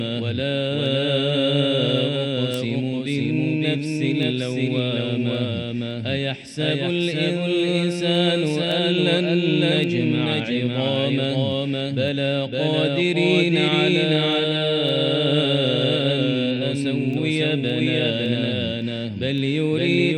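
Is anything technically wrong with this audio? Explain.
Yes, there are two faults.

Throughout the clip there is a doubled audio track. Everything is heard twice: a second full-band copy arrives about half a second later at roughly the same level, with no decay or room colour. This is likely caused by the sound being captured again through a slower path.

From 0.30 s to 19.94 s there are word clock ticks. A digital link is being read by a device on its own unlocked clock, with the two clocks differing by roughly 40 ppm. Each slip drops or repeats one sample, producing about 40 sharp ticks of uneven strength, roughly every half second.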